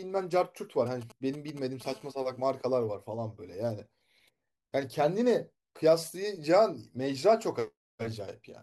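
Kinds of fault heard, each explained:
GSM signalling bursts: From 0.87 to 1.83 s a galloping dit-dit-dit of brief 217 Hz buzzes sits roughly 20 dB under the speech. A nearby 2G phone is sending short radio bursts while signalling, and the audio circuitry rectifies them into sound.
GSM phone buzz: From 1.85 to 2.77 s a hard, raspy 217 Hz buzz, rich in harmonics and unrelated to the speech, runs steadily at about 28 dB below it. A 2G phone in a call transmits 217 bursts per second, which the circuitry rectifies.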